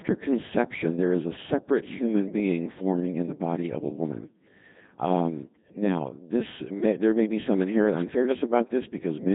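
Speech running through the Codec 2 vocoder for its whole length, with heavy damage: the voice is rebuilt from sine waves driven only by pitch, voicing, energy and a spectral envelope, so it sounds robotic and buzzy, consistent with a rate around 2.4 kbit/s.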